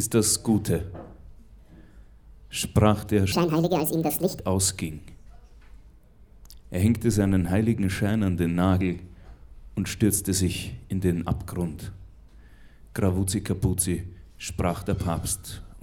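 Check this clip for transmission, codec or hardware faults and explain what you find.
One fault is audible. Section at the wrong speed, 3.32 to 4.40 s: this stretch plays 1.72 times too fast, likely because it was clocked or resampled at the wrong rate, so pace and pitch rise together by roughly ten semitones, giving a hurried, squeaky lurch before the original speed returns.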